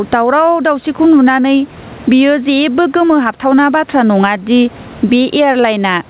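Throughout the speech, the input gain was likely set far too high, so a fast limiter clamps down on every loud syllable. The result is gain pumping: the gain swings by around 15 dB, leaving the sound flattened and squashed within the narrow, 4 kHz-limited call band.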